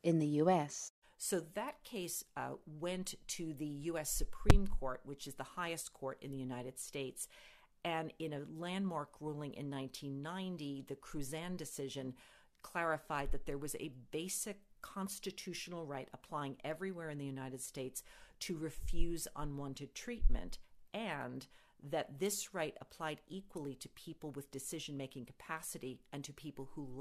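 No technical faults can be heard anywhere in the clip. Nothing along the way calls for a timestamp.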